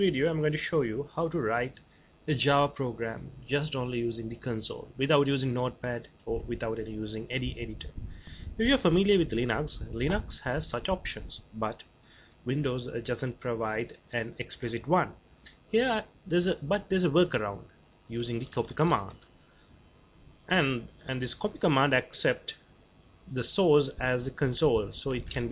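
No technical faults can be heard anywhere in the clip.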